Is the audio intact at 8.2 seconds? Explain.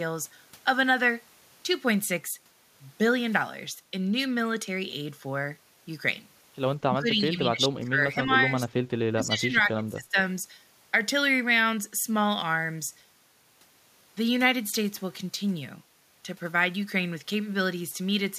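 No: speech suppressed in double talk, 6.84 to 8.51 s. An echo canceller likely mistook the talker for echo and ducked the speech in patches by up to roughly 15 dB.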